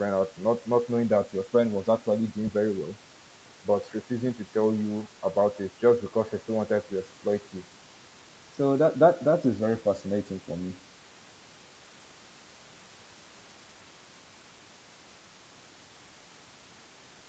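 No technical faults can be heard in this speech; its content stops at about 8 kHz, as expected after a call's microphone processing and Opus coding.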